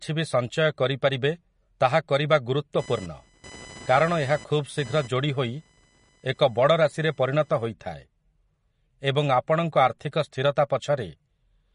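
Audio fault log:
throughout, MP3 compression: The encoder likely ran short of bits, at a rate that fits a low setting near 40 kbps, so it discarded weaker frequency lines and cut the top band. Nothing remains above 10.6 kHz, so the speech lacks its upper air. The damage is plainly audible: detail that flickers in and out between frames gives the voice a watery, swirly texture, sibilants turn metallic and chirpy, and consonant onsets smear.
2.79–7.66 s, computer activity noise: Activity in the computer's processor, graphics or mouse shifted the ground shared with the audio circuit, and that disturbance entered the signal. The result is a pulsing buzz repeating at around 1 kHz, sitting roughly 25 dB below the speech. It follows the machine's workload rather than the talker, so it appears and then drops away without any link to what is being said.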